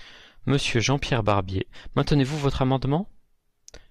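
No technical faults turn up anywhere in this speech recording. There is nothing here that needs a timestamp or a closer look.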